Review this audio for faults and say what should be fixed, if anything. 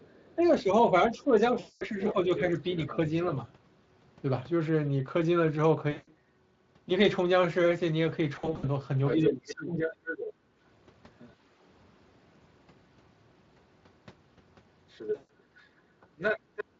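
Speech suppressed in double talk: the talker dips by about 10 dB over roughly a second and a half between 0.0 and 3.38 s, by about 20 dB from 9.16 to 9.77 s, and by about 40 dB at 16.73–16.80 s. Each dip lines up with the far side talking, so the likely cause is an echo canceller that can't separate the two and turns both down. Better double-talk detection, so the canceller holds its gain while both sides speak, would prevent this.

Other side's voice leaking through: there's a faint trace around 0.11–0.43 s at about -35 dB relative to the talker, a stronger stretch at 1.99–2.96 s at about -10 dB, and long runs at 9.06–11.33 s and 14.9–16.64 s at about -5 dB. It's likely loudspeaker playback the canceller didn't fully remove. A longer echo-tail model or a headset would keep it out.

VoIP packet loss concealed by the speech codec: you get a fading fill at 1.59–1.85 s (220 ms), 5.91–6.11 s (160 ms), scattered across 8.35–8.65 s with the longest gap 60 ms, and at 15.15–15.29 s (140 ms). 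The spacing fits 20 ms frames. The decoder extrapolates from its last pitch and filter and lets the gain sag. Forward error correction or a deeper jitter buffer would cover these gaps.

Background gated by the echo canceller: the room sound drops by about 9 dB for roughly 150 ms at 10.33–10.52 s, while the far side is playing, then comes back once the canceller releases. Gentler suppression with comfort-noise fill would hide this.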